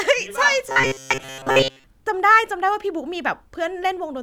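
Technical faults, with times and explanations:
0.69–1.84 s, robotic sound from repeated short buffers: the speech becomes a rigid metallic buzz at 133 Hz, likely from a roughly 7.5 ms chunk looping over most of the missing audio.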